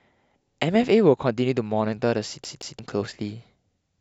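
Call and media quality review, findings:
CD stuck on one turn, 2.44–2.79 s: fixed 175 ms segment plays twice, brief mute at each jump; disc skip. Waveform shows identical repeated blocks with gaps.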